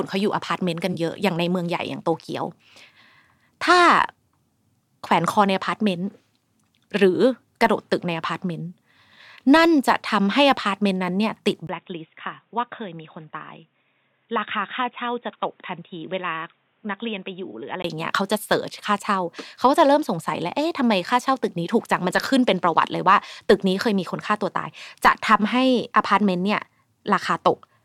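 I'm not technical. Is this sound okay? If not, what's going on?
No. Very early on, from 0.92 to 0.95 s, there's a tiny smeared, slightly noisy blip in the speech. That's AAC frame loss with concealment. The audio was sent in small compressed chunks, and one chunk, about 21 ms of sound, went missing. Rather than leave a gap, the player guessed at the missing bit using the sound just before it, and that guess is what smudges that instant.

The bigger change runs from 11.67 to 17.84 s. Right at 11.67 s there's a very brief dropout, then the speech turns dull and boxy, as if heard over a phone. Everything above 3.8 kHz is missing, it's noticeably quieter, and a faint new background hiss sits underneath. At 17.84 s the fuller sound comes back. This is likely an input switched to a poorer device, meaning the recording jumped partway through to a cheaper microphone or a headset's call mode, then back again.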